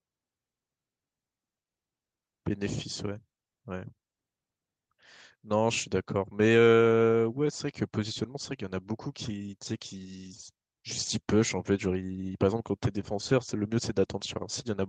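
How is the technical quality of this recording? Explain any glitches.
Listening through this speech recording, nothing stood out as a glitch or technical problem.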